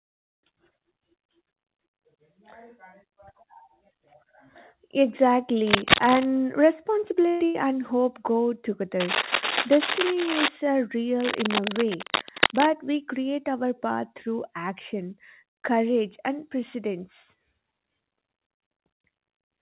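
Speech, heard through a narrowband call path with nothing above 4 kHz, as G.711 mu-law would give. Scratchy, uneven bursts of cable scratch noise ride over the speech from 5.67 to 6.25 s and from 9.00 to 10.48 s, a little louder than the voice. A third burst, from 11.20 to 12.67 s, is roughly as loud as the voice and ends just before "we create our". The likely cause is a worn cable or connector being moved. Unlike a dropout, the speech carries on underneath. Two bursts of packet loss occur at 7.28 to 7.45 s and 7.45 to 7.57 s. In each, about 120 ms and then about 90 ms of audio is replaced by the preceding sound held on and fading. The speech then resumes further along with that stretch gone, which sets these apart from the additive scratching.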